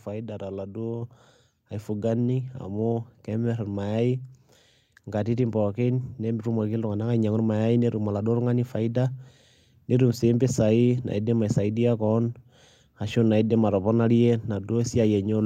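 At 1.02 s, just after "faida toladuo", the call software raised the microphone's input volume in a single step: microphone volume stepped up. The speech and the background noise behind it jump together by about 5 dB, an abrupt level change.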